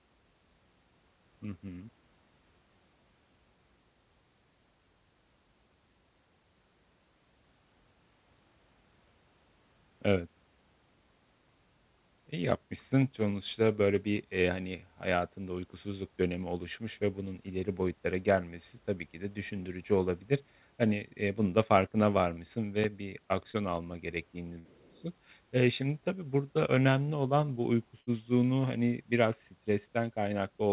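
At 23.51 to 23.57 s, between "farkına varmışsın ve bir" and "alma gerektiğini", a short concealed packet loss leaves a brief smear where about 25 ms was synthesised from the preceding sound, unlike a dropout's silence. Bursts of packet loss follow at 24.59 to 24.68 s, just after "alma gerektiğini", and at 28.01 to 28.10 s, between "burada önemli olan bu" and "hani biraz". Each extends the last sound for about 60 ms as a fading buzz or hiss, then skips ahead about 60 ms, losing audio rather than just blurring it. Throughout, the narrowband call codec leaves nothing above 4 kHz.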